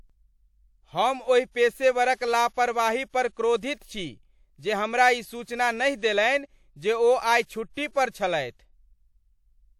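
A transform codec spread its quantisation noise across a whole block, and at 3.81 s a sharp attack landed late in that block, so noise scaled to the loud onset leaked into the quiet stretch ahead of it. The result is pre-echo from 3.78 s: a brief hiss of about 33 ms, running to 3.81 s, rising just before "छी जे हमरा ई", with the attack itself sounding softened and smeared rather than crisp.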